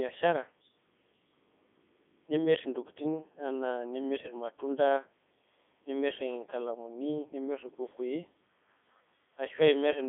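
Speech runs through the whole clip with the robotic, buzzy sound of the Codec 2 vocoder. The damage is heavy. No actual waveform is carried. Only pitch, voicing, energy and a rough spectral outline come through, and the decoder rebuilds the voice from sine waves. The sound points to the codec's top rate of 3.2 kbit/s. The band is narrow, roughly 200 Hz to 3.5 kHz, with nothing above 3.8 kHz.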